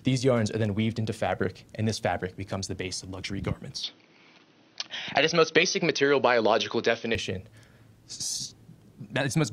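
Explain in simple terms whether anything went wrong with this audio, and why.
From 3.8 s to 7.2 s the sound turns duller, losing everything above about 6.2 kHz, with no gap and no change in loudness, then clears again. That is most likely an input switched to a poorer device, which also brings a faint background noise of its own.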